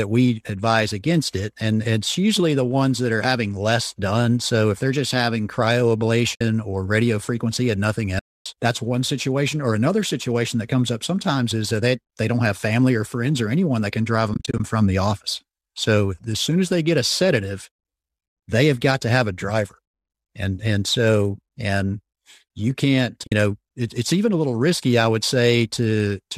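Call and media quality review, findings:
AAC frame loss with muting: the speech fades to silence and back at 6.35–6.41 s, 8.19–8.46 s, 14.34–14.60 s (scattered gaps, longest around 40 ms), and 23.27–23.32 s. Overlap-window fades soften the edges, unlike a hard-cut dropout. The gaps fit 10 ms frames, likely from a low-delay AAC decoder.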